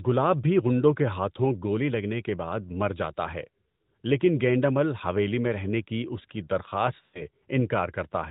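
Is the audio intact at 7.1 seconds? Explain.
No. From 7.06 to 7.22 s, just after "کی اس کی درخواست", the sound smears into a drawn-out hold that fades toward silence before recovering weak or rough. These are lost AMR speech frames. Radio errors made frames fail their checksum, so the narrowband decoder kept repeating its last good pitch and vocal-tract settings at falling gain. An 80 ms gap like this fits four consecutive 20 ms frames going missing.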